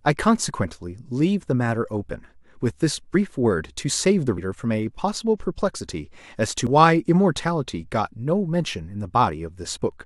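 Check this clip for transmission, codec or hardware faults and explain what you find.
The speech has three brief jumps where a short stretch of sound goes missing. These are compressed frames skipped, at 3.14 s, 6.67 s, and 9.71 to 9.77 s, losing roughly 50 ms, 70 ms and 20 ms. Whole frames never reached the output because they were missing or rejected as damaged, so playback leaps ahead by whole frames.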